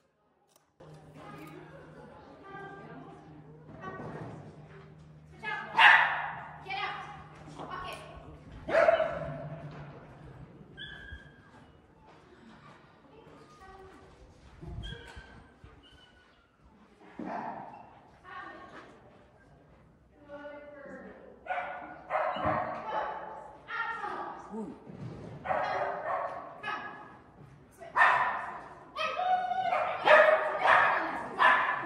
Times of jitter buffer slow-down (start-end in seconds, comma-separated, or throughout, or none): none